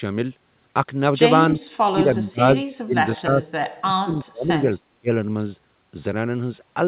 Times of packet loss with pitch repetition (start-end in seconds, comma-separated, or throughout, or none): none